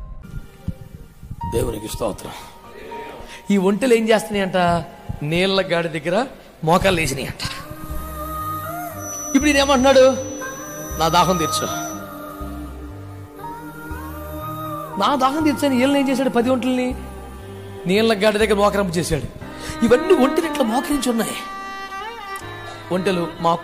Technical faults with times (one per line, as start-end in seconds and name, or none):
8.93-12.04 feedback whistle